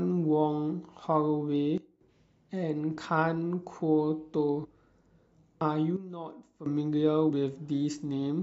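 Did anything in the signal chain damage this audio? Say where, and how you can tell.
Yes, two problems. The first is a sudden gain jump, most likely from a gain setting in the digital processing being applied instantly instead of ramped. From 1.78 to 2.01 s and again from 5.97 to 6.66 s the speech drops by about 12 dB, and the background noise drops with it. Because the level changes from one sample to the next, both edges are abrupt steps rather than fades.

The second is compressed frames skipped, which happens at the codec or storage stage. At 4.63 to 4.66 s the speech jumps forward by roughly a tenth of a second, which points to about four frames missing. At 7.29 to 7.31 s it jumps again by about 70 ms, around three frames. The decoder never played those frames.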